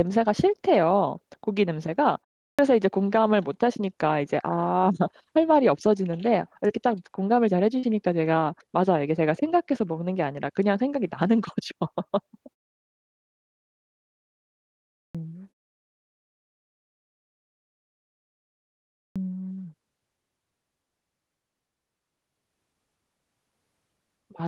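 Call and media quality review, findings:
Clipped start after a pause at 2.49 s, 15.05 s and 19.07 s. Speech bursts out of silence with the first 96 ms, 96 ms and 87 ms missing. Preceding pauses were 0.33 s, 2.58 s and 3.62 s. Probable component: output device sleeping in silence, then waking or relocking too late. Unlike a muted pause, where background fades out and returns ahead of the next sound with nothing lost, here the onset itself is gone.

Short concealed packet loss at 6.67 s and 7.79 s. Roughly 20 ms and 40 ms of call audio did not arrive in time. The receiver extended the preceding sound, pitched if voiced and shaped noise if not, then crossfaded back. Heard as a brief smear or wobble. Probable component: network and jitter buffer on the Opus call path, which fits around 20 kbps with a 12 kHz bandwidth. Differs from the clipped starts: filled rather than cut.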